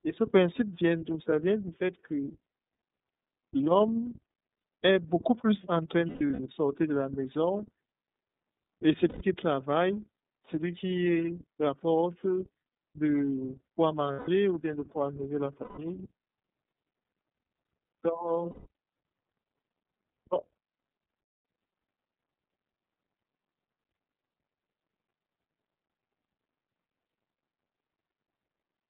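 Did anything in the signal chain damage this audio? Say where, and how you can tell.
Yes. At the codec stage, iLBC coding runs throughout. The band stops near 3.7 kHz and starts at 150 Hz, and the texture is rough and synthetic, unlike clean band-limiting. This fits iLBC near 13 kbps.

At the network stage, lost iLBC frames occur at 4.58, 6.09–6.39 (scattered), 9.09, 14.13, 15.62, 18.50 and 21.23 s. Each gap becomes a held buzzy vowel, not silence, and recovers instantly. The gaps last 60 to 210 ms, which fits whole 30 ms frames being lost.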